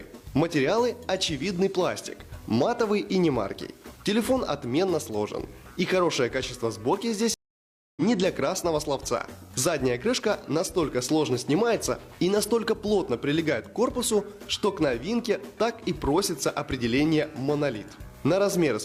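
At 7.34 s there's a stream reconnect. The connection dropped, the player went quiet for about 0.6 s, then reconnected and started a fresh decoder. At 8.02 s the audio picks up roughly a third of a second further on, so a short stretch is simply missing.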